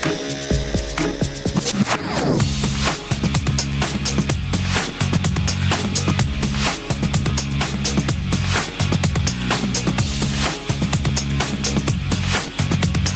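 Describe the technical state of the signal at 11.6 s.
Gain pumping runs throughout, including 11.6 s. Excessive input gain likely drives a fast limiter, so the gain swings by around 10 dB and the sound is squashed.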